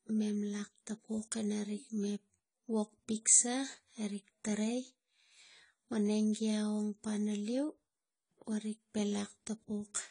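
Heavy AAC compression, likely AAC-LC at a bitrate in the region of 24 kbps, runs through the whole speech clip, starving the encoder of bits. Nothing survives above 10 kHz, so the speech sounds dull and smeared, with a warbling, fizzy texture on sibilants and held sounds.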